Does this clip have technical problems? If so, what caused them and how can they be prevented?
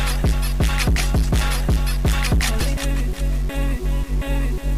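Yes. Grainy, gritty distortion runs throughout and changes with the sound. This is likely low bit depth without dither, around 5 bits, truncated, with the error sitting about 25 dB below the signal. Prevent it by keeping higher bit depth and dithering before any reduction.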